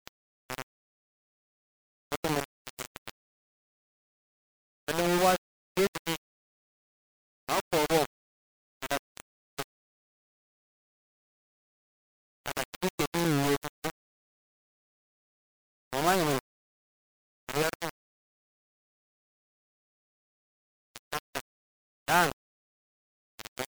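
A speech recording that was most likely reduced to around 3 bits and rounded without dither, so the quantisation error tracks the voice and sits only a few decibels below it. Every passage sounds coarse and grainy, and the quietest moments collapse to silence or sputter between adjacent steps. A loose connector crackle appears from 13.15 to 13.28 s, just after "shɪ bɪ kɛ dɪ". A contact briefly making and breaking chops the line, producing an irregular burst of scratchy crackle.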